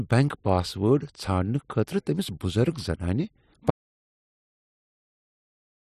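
At 3.71 s the speech cuts off mid-flow and the rest of the clip, to 5.86 s, is silent with no room tone at all. This audio dropout to silence most likely comes from the input being lost while the recorder kept writing zeros.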